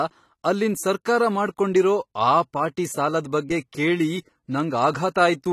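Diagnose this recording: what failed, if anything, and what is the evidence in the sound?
Codec: AAC compression. Nothing sounds above 14 kHz throughout, where the encoder cut the top band. The damage is plainly audible, likely AAC-LC around 32 kbps.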